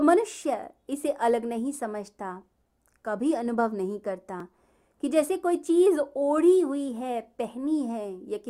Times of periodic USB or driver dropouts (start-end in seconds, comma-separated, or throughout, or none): 0.42-4.40